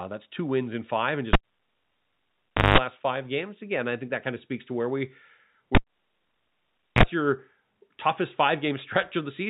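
Cable pulled and plugged in at 1.33 s and 5.75 s: a pop, about 1.4 s then 1.2 s of near silence, a brief 50 Hz, then 60 Hz, mains buzz as the tip reconnects, and another pop.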